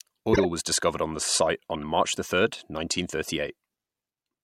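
A harsh burst of squeaky, misplaced noise cuts in from 0.33 to 0.46 s, just before "was discovered on the", and a much fainter blip follows from 1.74 to 1.84 s, right after "discovered on the site". Both are a corrupt frame decoded: flipped bits in a few compressed frames led the decoder to apply wrong gains and codes, putting energy at the wrong frequencies. The first peaks loudly, the second far lower.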